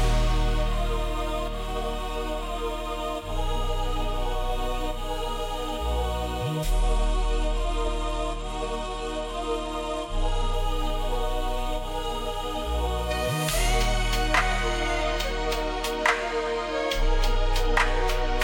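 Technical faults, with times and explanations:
6.72 to 10.53 s, Bluetooth SBC bit pool drop: the treble suddenly dulls and a gritty, grainy noise rises under the sound, then clears when full quality returns at 10.53 s. The link was congested, so the sender cut the encoder's bit budget to keep audio flowing. The upper sub-bands got few or no bits and the rest were quantised coarsely, which fits a bit pool falling from 31 to 14, or roughly 99 kbps.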